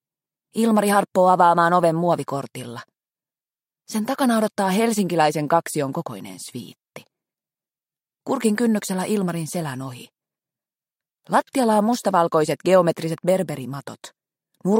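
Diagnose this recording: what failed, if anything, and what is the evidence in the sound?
Nothing failed here: listening closely, I can't hear any dropouts, clicks, distortion or other breakage anywhere in the recording.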